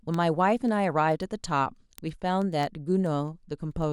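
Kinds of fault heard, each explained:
Word clock ticks: the speech is clocked by an unsynchronised receiver, so roughly every tenth of a second a sample slips, giving steady sharp ticks from 0.14 s onward.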